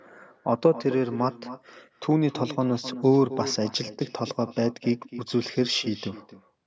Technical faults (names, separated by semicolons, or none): echo with no canceller